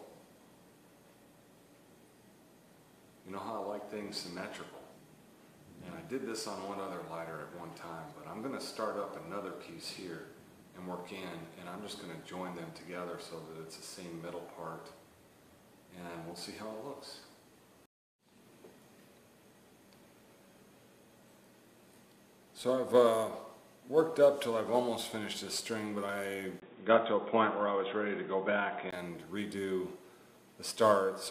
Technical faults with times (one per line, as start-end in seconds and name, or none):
26.60-28.93 input switched to a poorer device